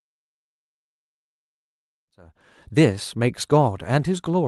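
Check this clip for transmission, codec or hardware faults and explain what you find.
I find no transmission, codec or hardware faults in this speech clip, only a smooth fade-in that reaches full level at about 2.74 s.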